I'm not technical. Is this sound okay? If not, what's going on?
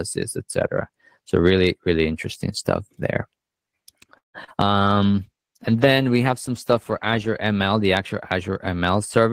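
No. At 4.17 to 4.36 s there is what is likely a call audio freeze: the sound stalls for about a fifth of a second, mostly in silence, then carries on exactly where it stopped. Nothing is lost, just delayed, which is how it differs from a dropout.

Right after, at 4.46 to 4.49 s and 4.49 to 4.52 s, come two short concealed packet losses. Here tiny pieces of sound really are missing, and the gaps were patched over. You hear a quick smear or wobble rather than a pause.

From 5.13 to 7.39 s, starting just before "ml the actual", there is a call bitrate drop. For over two seconds the sound turns duller and rougher, as if muffled, then clears. Nothing stops or skips; only the quality dips.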